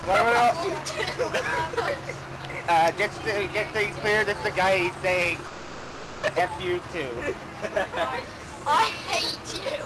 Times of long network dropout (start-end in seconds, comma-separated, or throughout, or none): 5.47-6.25